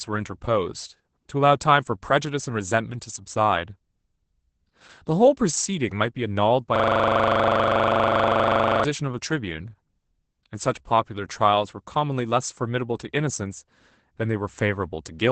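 From start to finish the speech passes through Opus voice compression running in its SILK mode, which codes the voice as a linear-prediction model with a coarsely quantised excitation. The result is wideband audio with nothing above about 8.7 kHz, and a plainly audible degradation that fits a bitrate around 12 kbps in 20 ms frames. The voice sounds muffled and slightly hoarse, with a faint robotic edge.

From 6.76 s to 8.84 s a system hang loop occurs. The computer or its driver stalled while the audio hardware kept replaying the same ring buffer, which points to a buffer of about 40 ms. That single 40 ms fragment repeats exactly, some fifty times, at 25 Hz. It comes across as a rapid, buzzy machine-gun stutter that freezes the speech for about two seconds before normal playback resumes.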